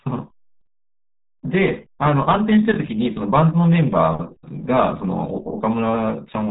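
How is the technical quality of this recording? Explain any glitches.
Poor: the whole recording carries heavy RealAudio 14.4 codec damage from start to finish. The speech has nothing above about 3.8 kHz, so it sounds muffled, with a gargling, watery texture, which fits a very low bitrate of around 8 kbit/s made for dial-up modems. At that rate the codec discards most of the spectral detail and approximates what remains.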